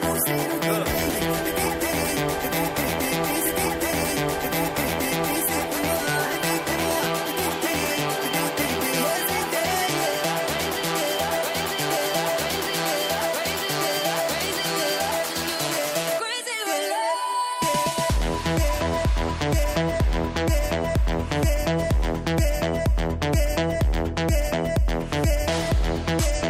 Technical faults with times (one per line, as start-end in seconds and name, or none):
3.45-5.45 stream segment repeated